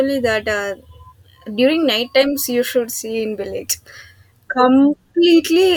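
No technical faults can be heard anywhere in this speech recording.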